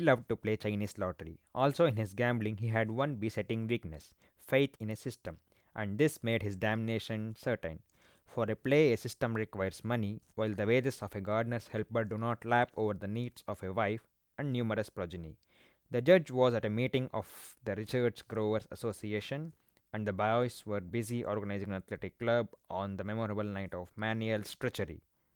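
No technical faults are audible.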